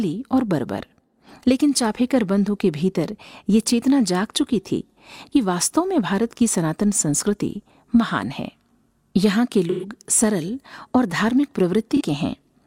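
Around 9.70 s the speech hits AAC frame loss with concealment: roughly 0.22 s goes smeared and phasey, which fits about three lost frames' worth of audio being patched over by the decoder reusing the last good spectrum with shuffled phase. A shorter hit follows at 11.96 to 12.01 s, consistent with a single dropped frame, heard as a brief noisy blur rather than a gap.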